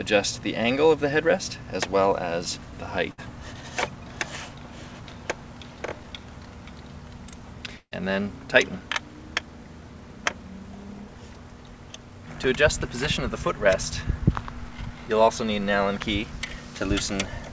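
Burst of packet loss at 3.12 to 3.20 s and 7.78 to 7.93 s. Lost packets were covered by stretching the last sound and fading it down, skipping about 60 ms and 140 ms of audio. The second gap fades fully to silence for about 70 ms, heard through a call path with nothing above 8 kHz, which fits a G.722 codec.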